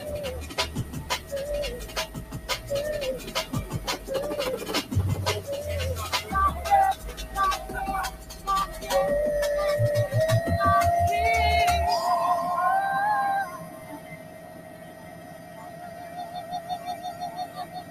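A noise suppressor designed for speech has been applied to sound it wasn't built for. It treats steady, held and decaying material as noise and pulls it down, with gain swinging by roughly 15 dB across the clip. Onsets pass, but sustained energy sinks, so the level pumps and thins. On a waveform the envelope looks jagged after each attack. On a spectrogram, steady bands and decay tails fade into dark gaps rather than smooth trails.

The sound is cut by the noise suppressor at specific points. From 0.42 to 1.32 s, the steadier material drops by up to about 8 dB for most of that span. From 1.85 to 2.42 s, and again from 8.13 to 8.45 s, it dips by about 9 dB, sinking sustained parts while sharp edges survive. From 13.53 s to the end, it falls by about 9 dB, and the tails are visibly truncated as darkened regions in the spectrogram.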